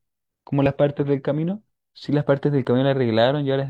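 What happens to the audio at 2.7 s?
Just before 2.7 s, from 2.65 to 2.67 s, there is an overlap between stream segments. Two segments' timestamps overlapped, and the trimmed region held speech that was not duplicated, so about 23 ms of the speech is lost. The waveform jumps across the gap, producing a short click or skip.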